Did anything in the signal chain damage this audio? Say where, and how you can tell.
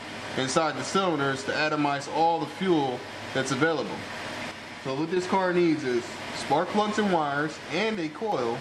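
Yes. At 4.51–5.17 s and 7.95–8.32 s, level snaps down about 6 dB, tone unchanged: likely one channel drops out in analogue wiring, not a gradual gain dip.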